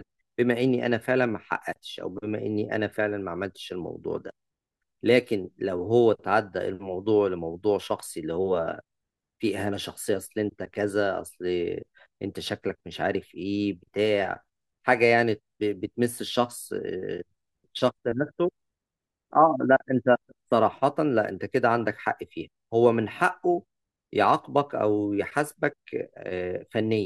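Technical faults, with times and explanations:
No technical faults detected anywhere in the speech recording.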